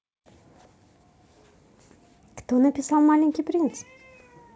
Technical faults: none

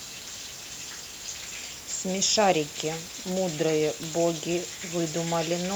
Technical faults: none

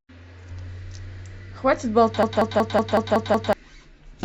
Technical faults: system hang loop

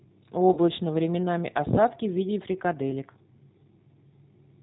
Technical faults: G.729 codec; VoIP packet loss concealed by the speech codec

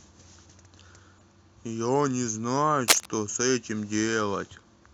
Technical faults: corrupt frame decoded; cable scratch noise

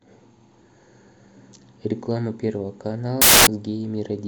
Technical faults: samples built from the wrong bytes

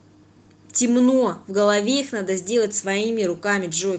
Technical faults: none

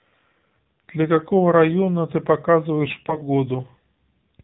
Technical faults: AMR narrowband mobile codec; AMR bit errors

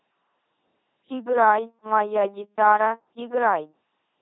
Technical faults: LPC-10 vocoder

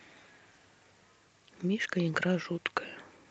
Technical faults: skip ahead; jitter buffer speed-up

